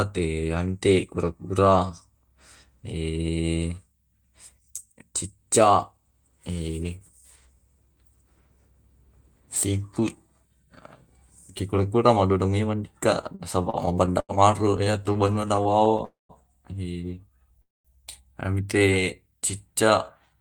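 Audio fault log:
13.21–14.32 s and 14.77–16.02 s, repeated stalls (stutter): The first run holds eight short stalls totalling 222 ms, the longest 88 ms, about a fifth of that stretch. The second has fifteen tiny ones totalling 188 ms, none over 20 ms. Packets came late, so the jitter buffer kept draining. Each time the last sound was stretched to bridge the wait. Nothing is lost, but the sound drags and judders.
16.05–16.32 s and 17.62–17.88 s, call audio freeze: Each is a single hold of roughly a quarter second, 247 ms and then 230 ms. The held sound trails off and falls silent for 160 ms in the first and 210 ms in the second. The likely cause is a delay jump of the same length, emptying the jitter buffer. Playback then resumes where it stopped, so time is inserted rather than lost.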